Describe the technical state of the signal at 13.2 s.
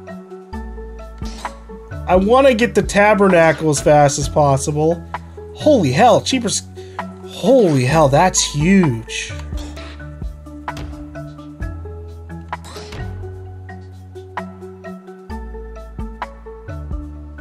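At 13.2 s the signal is intact, with no audible technical fault at that moment.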